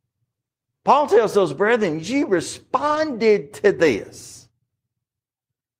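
At 1.81–1.83 s and 2.87–2.97 s, a lost packet rebuilt from error correction: the decoder played low-bitrate backup copies, filling 20 ms and 60 ms with briefly rougher, noisier sound.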